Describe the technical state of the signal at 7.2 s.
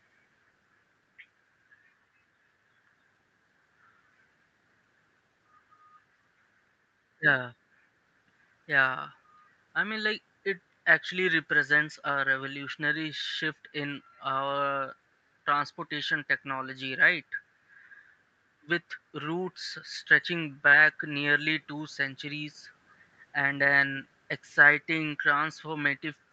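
At 7.2 s the speech comes through intact, with no dropout, distortion or other fault, only the normal narrowed bandwidth of a call, with nothing above about 8 kHz.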